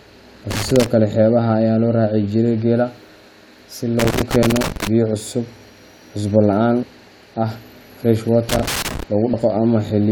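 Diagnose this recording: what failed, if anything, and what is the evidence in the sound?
Loose connector crackle at 0.51–0.86 s (before "kale xeebaha"), 3.99–4.87 s and 8.49–9.03 s (after "ah fresh"): in the analogue wiring, a worn contact makes and breaks, chopping the signal into irregular scratchy bursts.

Damaged data in a compressed stream at 6.82–6.84 s (just before "ah fresh") and 9.32–9.34 s: at the codec stage, corrupted frames throw the decoder out of sync until it finds the next header, leaving short blips.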